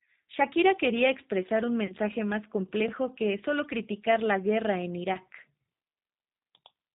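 Across the whole speech clip the G.729 codec is plainly audible. Nothing passes above 4 kHz, and the voice has the slightly rough, synthetic grain of a coder that rebuilds each 10 ms frame from a vocal tract filter, a pitch predictor and a few pulses. This is consistent with an 8 kbit/s G.729A stream. A simple low-pass filter would be merely dull rather than grainy, which is what separates this from plain band-limiting.

At 1.86 s, just after "quería expresar un", VoIP packet loss concealed by the speech codec begins. About 30 ms of audio is missing, which fits three lost 10 ms frames. The decoder carries its last pitch and filter forward at falling gain, giving a brief buzzy tone or coloured noise that fades, and the voice stays weakened until about 1.94 s as the frames rebuild. A shorter loss of about 10 ms follows at 5.14 s, after "criticar la guerra en", with recovery by about 5.17 s. 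A dropout or a hard cut would leave silence or a click instead of this smeared continuation.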